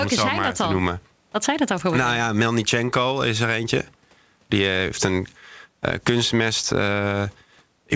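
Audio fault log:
No fault to record in this audio fault log.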